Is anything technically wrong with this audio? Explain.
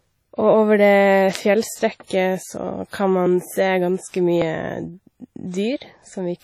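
Yes, there are two problems in this speech recording.

Throughout the clip there is WMA compression damage, and it is heavy. The sound rings and smears, with a washy hiss that rises and falls with the signal, and there is nothing above 18.6 kHz. The likely cause is a Windows Media Audio transform encoder using long blocks. These spread quantisation noise across tens of milliseconds and drop weak spectral lines entirely. The amount of damage points to a low bitrate of around 32 kbps.

At 1.35 s there is an electrical switching spike, heard as a sharp snap added on top of the speech. It is likely a nearby switch, motor or static discharge arcing briefly, with the audio line picking up the burst as an impulse that is not part of the recorded sound.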